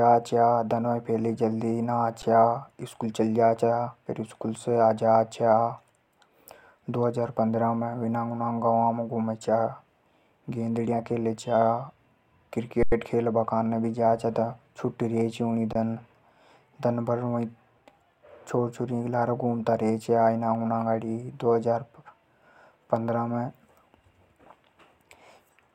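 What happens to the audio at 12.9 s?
The output buffer ran dry at 12.83 s, an underrun with held sample: the converter froze on its last value for about 93 ms, a gap of 4096 samples, until data returned at 12.92 s. The waveform sits flat, so the speech simply stops with almost no click. Because essentially no audio was lost, playback picks up exactly where it paused, and the return is soft rather than a sharp tick.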